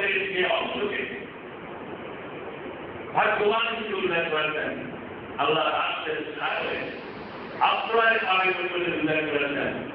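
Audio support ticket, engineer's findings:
Digital radio blending to analogue, 6.34–8.77 s: hybrid receiver lost digital and crossfaded over about 0.27 s to the AM simulcast, then back. Hiss about 30 dB under the signal, level shift about 1 dB. Smooth crossfade into hiss, not a hard dropout or concealment glitch.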